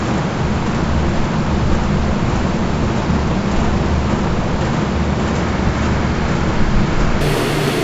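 From 7.21 to 7.83 s the sound turns an octave higher and runs twice as fast: wrong sample rate, which fits 16 kHz audio played back at 32 kHz.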